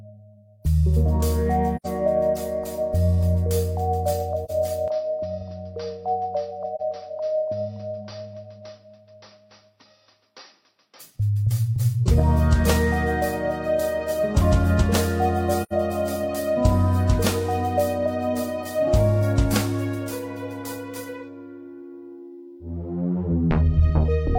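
At 1.76 s, 4.44 s, 6.75 s and 15.63 s, AAC frame loss with muting leaves soft-faded holes of roughly 85, 43, 43 and 85 ms, fitting one or two zeroed frames. Each shows as a tapered gap in the waveform and a blank vertical strip on the spectrogram.

From 4.88 s to 11.0 s, the sound abruptly turns duller and a few dB quieter, with a faint new noise floor beneath it. The likely cause is the input being switched to a poorer device. The spectrogram shows an empty band above 5.8 kHz throughout this stretch.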